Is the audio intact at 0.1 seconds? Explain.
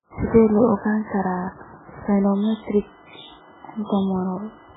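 No. At 0.1 s, as across the whole clip, the speech shows heavy MP3 compression damage, likely from a very low bitrate around 8 kbps: nothing above 3.8 kHz survives, and starved frequency lines flicker, leaving a watery, swirly sound.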